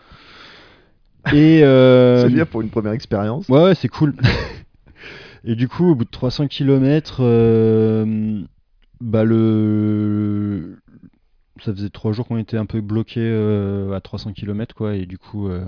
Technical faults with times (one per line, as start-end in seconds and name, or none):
none